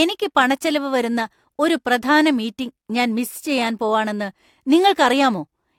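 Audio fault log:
Nothing stood out on listening to this speech recording.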